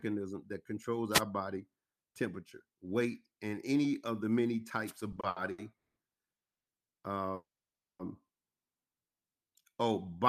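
At 1.11 to 1.22 s, between "that controls" and "body temperature weight and", a wireless microphone noise hit breaks through. It returns at 4.86 to 4.92 s, after "any of the many". The FM radio link faded as reflections cancelled, and receiver noise rose. Each hit is a short swish of static.

From 5.12 to 5.97 s the sound stutters. There are six repeated stalls, the longest 190 ms. The receiver stretched the last sound across 380 ms in total, nearly half the span. Nothing is lost, but the flow drags and jerks.

At 6.35 to 6.67 s the audio stops for 310 ms of silence, then picks up where it left off. A second, longer call audio freeze runs from 7.35 to 8.00 s. A brief continuation fades, then about 560 ms of silence follows. Packets were likely held up, emptying the jitter buffer.

From 9.20 s to the end, a jitter buffer slow-down adds 145 ms. Single pitch periods were repeated to rebuild a reserve. 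The sound runs at 88% speed with unchanged pitch. Sounds are drawn out.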